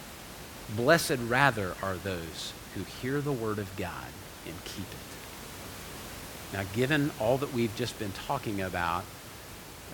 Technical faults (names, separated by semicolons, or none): none